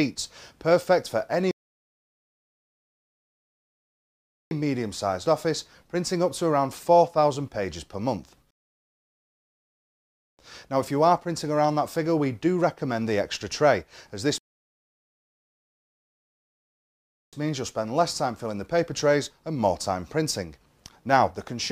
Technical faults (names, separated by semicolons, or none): rebuffering stall